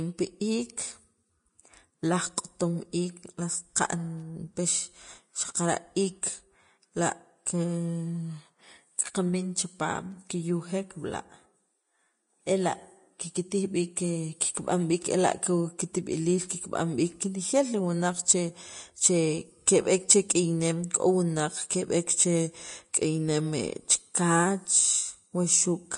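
From start to finish the speech sounds hissy and grainy, with sibilants turning to a fizzy wash and consonant attacks smeared. Nothing comes through above about 10.6 kHz. That's most likely Vorbis compression at a low setting, probably somewhere near 33 kbps. The encoder lowers its cut-off and quantises the remaining treble so coarsely that the fine detail is swapped for noise of similar energy, which roughens the tone of every phrase.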